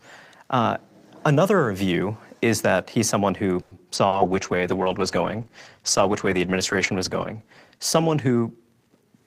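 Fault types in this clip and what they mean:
call audio freeze: after "that he's someone who" at 3.61 s, the sound stalls and is extended for 0.1 s, likely a jitter buffer running empty; nothing is lost.
skip ahead: at 3.95 s playback jumps forward, dropping roughly 70 ms of speech and splicing the two sides together with almost no gap.
short concealed packet loss: from 4.08 to 4.15 s, 60 ms never arrived; the receiver patched 40 ms by extending prior sound, leaving a brief smear.
call bitrate drop: from 4.1 s to the end, encoding falls from 64 to 13 kbps, staying lowest for 3.25 s, so speech turns coarse and muffled.
jitter buffer slow-down: between 4.29 and 4.89 s, repeated pitch periods add 65 ms, running speech at 91% speed without changing pitch, sounding drawn out.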